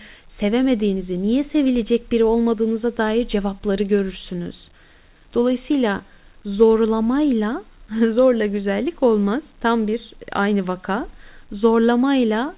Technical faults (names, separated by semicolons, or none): none